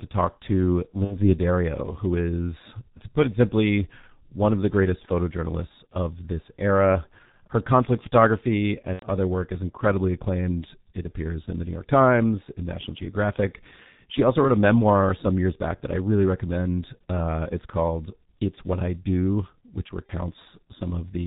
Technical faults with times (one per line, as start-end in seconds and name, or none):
0.00-21.26 G.723.1 codec
1.05-1.28 VoIP packet loss concealed by the speech codec
8.93-9.05 VoIP packet loss concealed by the speech codec
20.07-20.11 VoIP packet loss concealed by the speech codec